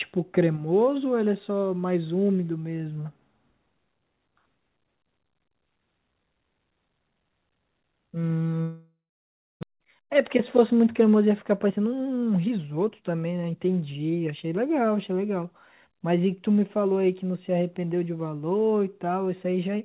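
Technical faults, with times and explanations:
8.62–9.65 s, long network dropout: the last sound smears into a fading buzz, then about 0.62 s of silence follows. Audio resumes with roughly 0.6 s missing, likely because packets stopped arriving. Unlike brief packet-loss concealment, the gap outlasts the fade and the lost stretch never returns.
9.73–13.02 s, jitter buffer speed-up: the sound runs at 112% of its normal pace with pitch unchanged, so it sounds hurried rather than higher. The receiver trims pitch-period slices to shed roughly 0.4 s of backlog left by the outage. Plain resampling would raise the pitch as well.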